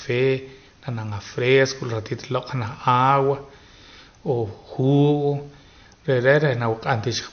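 From start to finish the speech has plainly audible damage that sounds like MP3 compression at a low bitrate, likely around 48 kbps. Nothing comes through above 6.5 kHz, so the top end is dull, and the weak detail swirls and goes watery as it drops in and out.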